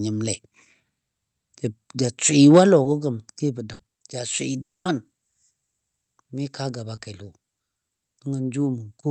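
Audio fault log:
2.83 s and 6.95 s (just after "kaa gaba"), short concealed packet loss: about 20 ms of audio never arrived, so the decoder extended the preceding sound and blended back. It is heard as a brief smear or wobble. On a spectrogram, harmonics or noise smear for one frame, with no visible gap.
3.73–3.81 s, burst of packet loss: about 60 ms went missing, and the receiver continued the last sound while fading it, giving a short held buzz or hiss before speech resumes further on. A spectrogram shows flat, repeated bands that dim, and the waveform shrinks, then jumps.
4.61–4.87 s, long network dropout: about a quarter second of speech is gone. A brief fading continuation gives way to silence for most of the gap, likely because the link delivered nothing for that stretch. The waveform sits nearly flat there, and the spectrogram shows a blank column, still capped near 8 kHz by the Opus call path.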